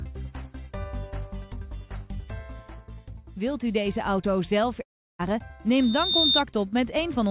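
From 4.82 to 5.21 s the sound breaks off. The last fragment is stretched into a fading buzz, then near-silence, and the audio resumes with roughly 0.38 s gone. This is likely a long network dropout. A brief glitch would not leave a gap, and this one does.

From 5.71 to 6.44 s a single 3.6 kHz tone swells over about half a second to roughly 10 dB above the programme. That is a loudspeaker feedback squeal, a self-sustaining loop. The tone sits inside the 4 kHz band limit of the call path, which fits a G.711 codec. Unlike a steady interference whine, it grows on its own.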